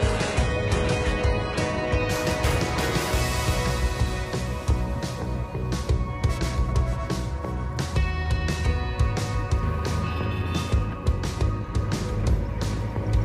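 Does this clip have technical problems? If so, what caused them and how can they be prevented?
Yes. For the first 2.0 s, the adaptive stream starts at a low bitrate. The treble is gone above 11.5 kHz and sounds smeared, which fits a very low HE-AAC rate, until it jumps cleanly to the better stream. Preventing it means starting playback on a mid-level bitrate or measuring the connection before playback begins.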